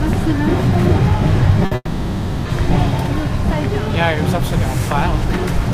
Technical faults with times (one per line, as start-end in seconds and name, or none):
1.65-1.73 burst of packet loss
1.75-2.47 long network dropout